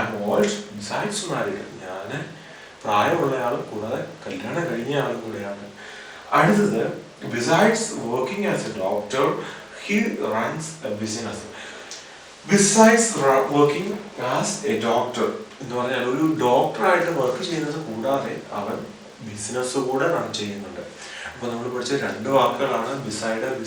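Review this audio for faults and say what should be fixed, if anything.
A resampler restarted on every block causes a 50 Hz buzz throughout, one tick per 20 ms block, present only with signal. The conversion, consistent with 24 kHz to 48 kHz, loses neighbouring samples at each block edge. The waveform shows small steps every 20 ms, and the spectrogram shows faint vertical stripes. To prevent this, keep the resampler's filter state running across blocks instead of reinitialising it for each one.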